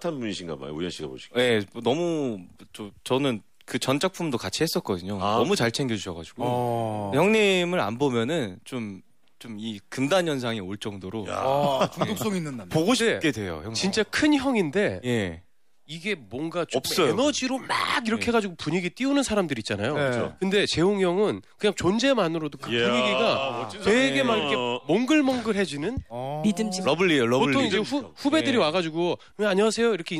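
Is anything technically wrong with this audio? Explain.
No, nothing in this audio points to a technical problem with how the signal was captured, processed or delivered.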